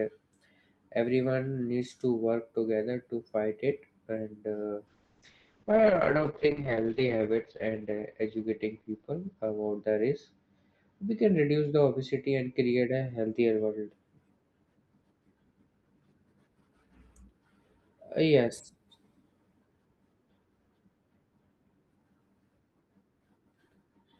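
From 4.88 to 13.97 s the speech turns rough and muffled, its top end cut to 8 kHz. This is a call bitrate drop, fitting Opus starved to about 7 kbps.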